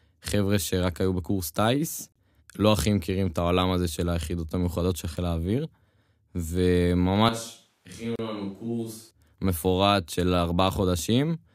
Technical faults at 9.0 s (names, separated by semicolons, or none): switch to a distant microphone